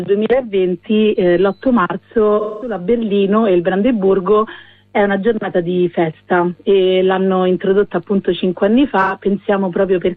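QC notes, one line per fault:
2.39 to 2.76 s, AAC frame loss with concealment: about 213 ms of data went missing, which fits five lost frames, and the decoder rebuilt the gap from the last good spectrum, giving a smeared, noisy patch.
9.01 to 9.13 s, AAC frame loss with concealment: a shorter 85 ms gap, consistent with two lost frames, was filled from the preceding spectrum, so the sound briefly turns phasey and blurred before clean decoding resumes.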